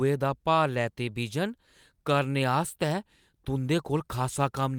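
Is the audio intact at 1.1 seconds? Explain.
Yes, at 1.1 seconds the audio is intact, with no dropout, click, distortion or other fault at that point.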